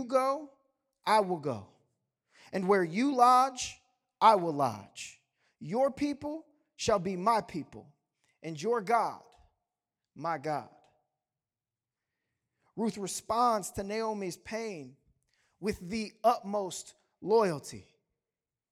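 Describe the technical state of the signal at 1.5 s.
At 1.5 s the speech signal is intact, with no dropout, distortion, glitch or other technical fault to be heard.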